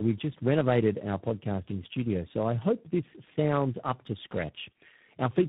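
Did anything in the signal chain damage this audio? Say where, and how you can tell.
Yes, tandem speech coding at the codec stage. Speech sounds rough, muffled and warbly throughout, with nothing above 3.8 kHz. Each of about three coders re-encoded the previous one's degraded output.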